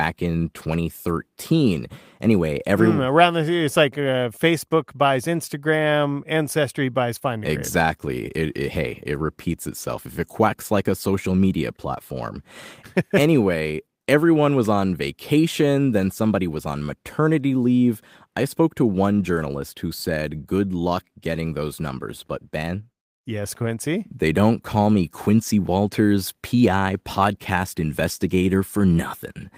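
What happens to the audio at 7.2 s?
Nothing goes wrong at 7.2 s; the speech carries on intact, with no dropout, click, distortion or other fault at that moment.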